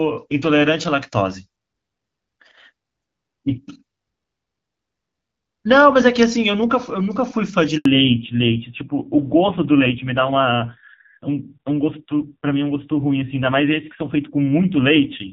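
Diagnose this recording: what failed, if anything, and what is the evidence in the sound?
At the network stage, a handover gap: while the call switched networks, no speech frames arrived. The speech dies away at 7.77 s and stays silent for 80 ms until 7.85 s, when the new link starts. Whatever was said in that window is simply gone.

At the codec stage, a fallback to narrowband follows the handover. From 7.85 s to the end, nothing remains above 4 kHz. The speech turns duller and rougher, which points to AMR-NB at about 5.9 kbit/s replacing AMR-WB at about 12.65 kbit/s, which sounded clear before the switch.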